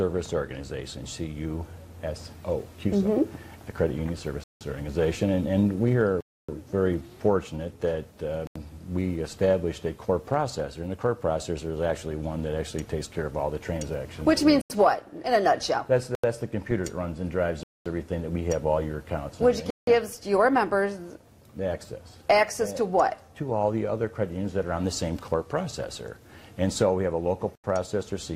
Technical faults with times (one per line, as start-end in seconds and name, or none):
4.44-4.61 block of digital silence
6.21-6.49 block of digital silence
8.47-8.56 block of digital silence
14.61-14.70 block of digital silence
16.15-16.24 block of digital silence
17.63-17.86 block of digital silence
19.70-19.87 block of digital silence
27.55-27.64 block of digital silence